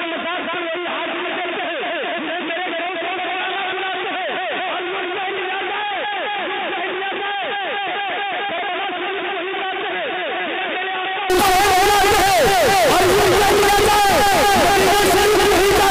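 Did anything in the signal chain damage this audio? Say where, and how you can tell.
Yes. Until 11.3 s the sound is dull, boxy and somewhat quieter, with nothing above 3.7 kHz, then clears abruptly. The likely cause is an input switched to a poorer device at the driver stage.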